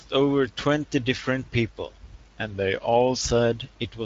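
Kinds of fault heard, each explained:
Drift correction step: from 2.51 to 3.22 s the speech slows by 5.8% and drops 104 cents, about a semitone, then snaps back. This is likely a clock-matching resampler refilling its buffer in one step. Unlike tape wow, the shift is abrupt and steady rather than wavering.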